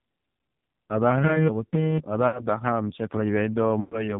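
All the way through, the speech has the narrow, boxed-in quality of the AMR narrowband mobile codec. Nothing above 4 kHz survives, and the voice comes across buzzy and synthetic, the way a vocal-tract model sounds when it's fed only a handful of excitation pulses per 5 ms slot. The damage is heavy, which fits one of the low AMR modes around 5.9 kbps, where there just aren't enough bits to carry natural texture.

Then, from about 2.28 to 2.45 s, there's a short smear where the sound hangs and sags. That's lost AMR speech frames. The frames failed their checksum, so the decoder kept replaying its last good pitch and filter settings at falling gain. The gap is about 60 ms, which fits roughly three dropped frames, and the sound comes back a bit rough. A longer run hits from about 3.80 to 4.19 s, with around 120 ms concealed. There the sound stretches out and fades toward silence as the gain decays.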